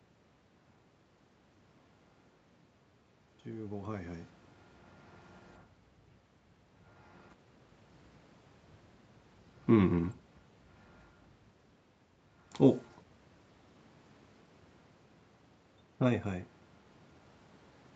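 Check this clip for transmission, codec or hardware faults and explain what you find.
No transmission, codec or hardware faults can be heard in the speech. The sound stops at 8 kHz, as a wideband call path such as Opus would leave it, the room's background noise stays underneath, and the level changes around 4 s and 15.5 s come from the talker moving relative to the microphone.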